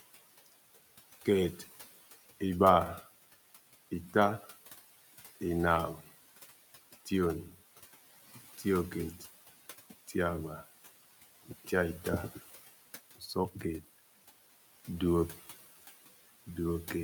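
Noise suppressor artifacts run through the whole clip. A suppressor is estimating the steady background as it goes and pulling down each frequency band it judges to be noise, by about 15 dB in the gaps. The room noise, sitting about 17 dB under the speech, therefore drops away between phrases and swells back beneath each utterance.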